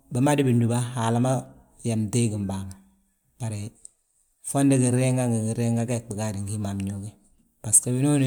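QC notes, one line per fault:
No technical faults were detected anywhere in the signal.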